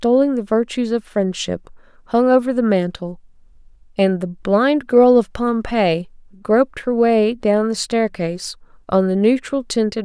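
No technical faults are audible.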